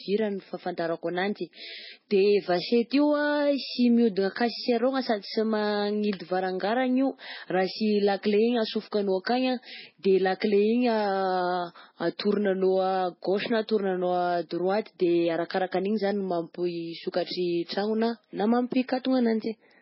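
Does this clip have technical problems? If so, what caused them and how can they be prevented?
Yes: throughout, the speech sounds watery, with a hard treble ceiling at 5.6 kHz, likely MP3 compression at a very low bitrate around 16 kbps. Unlike a plain low-pass filter, weak components also flicker between frames. Prevent it by encoding at a higher bitrate.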